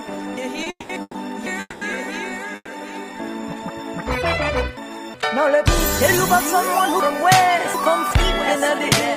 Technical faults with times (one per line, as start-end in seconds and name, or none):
0.37-1.46 chunks out of order
0.63-0.68 short stall from a late packet
0.70-1.16 call audio freeze
1.60-1.83 call audio freeze
2.55-2.69 call audio freeze
4.03-5.14 chunks out of order
7.00-8.11 chunks out of order